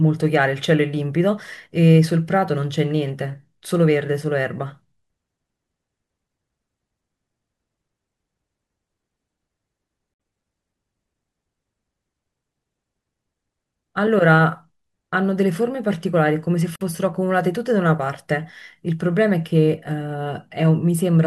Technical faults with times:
10.14-10.20 gap at a join of encoded pieces
16.76-16.81 gap at a join of encoded pieces

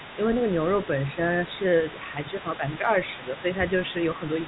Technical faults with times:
0.00-4.47 other side's voice leaking through
2.13-2.88 speech suppressed in double talk
3.17-3.45 speech suppressed in double talk

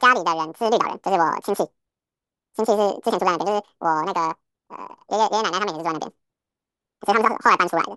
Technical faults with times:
0.00-7.96 wrong sample rate

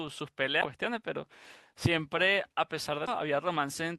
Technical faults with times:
0.61-0.66 compressed frames skipped
3.07-3.10 compressed frames skipped

